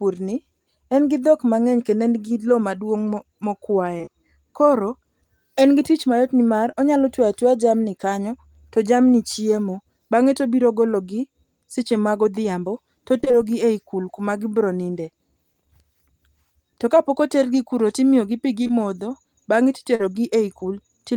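At 3.97 s, three short concealed packet losses run back to back until 4.09 s. Audio failed to reach the decoder in time. The receiver bridged each hole by extending the last sound, then blended back. Each hole is about 20 ms, which fits 20 ms packets. Here it sounds like a brief smear. Another follows at 6.71 s, between "gi tich mayot nimar" and "onyalo twe atweya jamni". It is a brief smear.

From 13.21 s to 13.35 s, right after "tobiro gologi seche magodhiambo", there is repeated packet loss with a robotic sound. Holes arrive one after another, the longest about 22 ms. Each is patched by continuing the previous sound before the next gap hits. Nearly half of this stretch is synthetic fill. The result is choppy, with pieces of sound missing.

Two more short concealed packet losses sit at 18.63 s and 18.67 s, ending at 18.71 s, just after "otergi kuro timiyogi pi". They give a short smear. 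The last is at 19.95 s and lasts about 40 ms, which fits two consecutive packets. It is the longest single hole, a smear.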